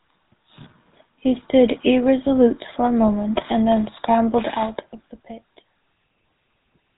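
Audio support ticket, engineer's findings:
GSM full-rate codec throughout: vocal-tract model driven by sparse regular pulses, nothing passed above 4 kHz. Plainly audible buzzy, gravelly roughness on the speech, consistent with a 13 kbps full-rate stream.

GSM bit errors, 4.62–4.71 s: corrupted filter, pitch and gain values reaching the decoder, consistent with roughly four 20 ms frames hit. Brief squawk and gargle as spectrum and level lurch.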